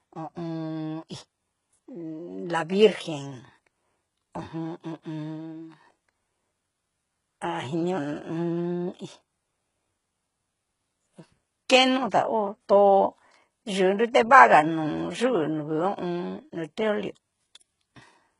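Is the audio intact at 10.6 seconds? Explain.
No. Throughout, including 10.6 s, nothing exceeds 11.1 kHz and s sounds turn gritty and metallic, likely heavy HE-AAC compression rebuilding treble from copied lower bands.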